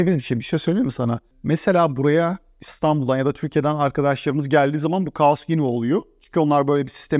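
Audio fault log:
No technical faults can be heard anywhere in the speech, and the signal holds steady without any disturbance from the recording, transmission or playback chain.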